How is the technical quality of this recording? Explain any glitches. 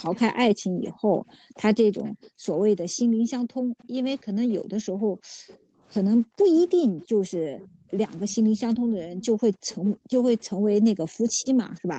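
The recording has two recurring problems: a faint delayed copy of the speech, and room sound that is repeatedly switched down by call processing. Everything sits under a clean ceiling at 8 kHz from the call path.

Echo leak appears at 0.04–2.27 s, 3.82–3.87 s, 5.48–5.57 s, 7.01–7.67 s, 9.22–9.89 s and 11.31–11.8 s. Each time, a second copy of the speech trails the original by 321 ms. It is loudest near 0 to 2.3 s and 9.2 to 9.9 s, roughly 20 dB below the speech, and elsewhere is weaker, about 25 to 35 dB below. The likely cause is a far end playing the call over a loudspeaker whose echo canceller let some of its own microphone pickup pass back. On a spectrogram, the harmonic pattern of each phrase reappears faintly, shifted 321 ms to the right.

Background gated by the echo canceller runs from 0.54 s to the end. Whenever the canceller judged the loudspeaker active, it pulled the microphone down hard, up to about 40 dB. 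The room tone therefore dips or vanishes for moments and then swells back, giving an on-off ambience. In the waveform, the low noise floor drops to near-flat stretches. On a spectrogram, the broadband background haze shows abrupt vertical gaps.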